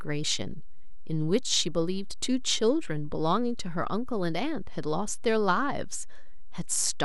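A DC offset runs through the whole speech recording, from start to finish. The entire waveform sits shifted off the zero line by a fixed amount, about -30 dBFS. You cannot hear this shift as a tone. It shows up as steady energy at 0 Hz, the very bottom of the spectrum. It also eats headroom, because peaks on one side reach full scale sooner. Edits or fades can then produce clicks.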